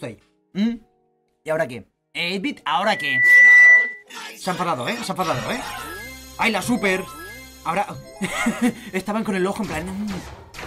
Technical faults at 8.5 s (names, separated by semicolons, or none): none